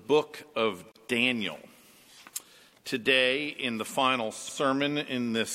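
At 0.92 s the sound drops out for about 37 ms, a brief hole with smeared edges, then resumes exactly where it stopped. This is a gap at a join of encoded pieces: separately encoded sections were spliced without trimming each run's leading delay and padded final frame.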